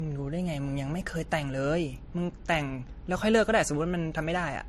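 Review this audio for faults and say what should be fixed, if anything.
Transcoding between lossy codecs is audible throughout the speech. Nothing sits above 13.4 kHz. Two sets of codec smearing overlap. This likely comes from a low-rate MP3 re-encoded as AAC. The second encoder spends bits on the first one's damage. Encode once, from the original.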